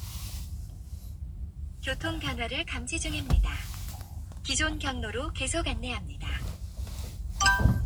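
No technical faults are audible anywhere in this recording of sounds, so there is nothing to log.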